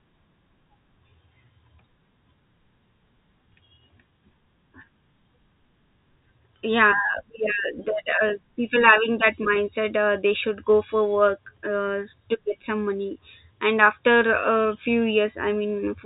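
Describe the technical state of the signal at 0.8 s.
At 0.8 s the speech is intact, carried through G.711 telephone coding with its ordinary telephone-band character: nothing above about 3.8 kHz and only faint level-following quantisation noise.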